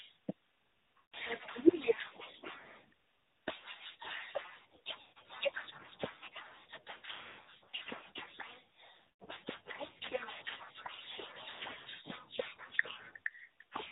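AMR narrowband mobile codec is present from start to finish. The speech is cut off above 4 kHz and rebuilt from a vocal-tract model driven by sparse pulses, so it sounds plainly buzzy and synthetic. The level of damage fits a 10.2 kbps mode.

Lost AMR speech frames occur at 0.98 to 1.14 s, 5.02 to 5.31 s, 7.00 to 7.82 s, 8.96 to 9.23 s and 11.50 to 11.60 s. Each time, the decoder repeats the last good pitch and filter settings at falling gain, so the sound smears and fades. The losses at 7.0 and 9.0 s are scattered, with runs no longer than 100 ms, and sound like broken, warbling stutters.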